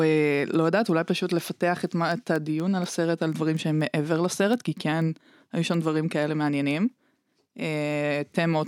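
A speech clip with word clock ticks running from 0.18 s to 8.64 s: around forty sharp, uneven clicks, one roughly every fifth of a second. That fits an unlocked digital receiver whose clock drifts about 100 ppm from the sender's, slipping a single sample at each crossing.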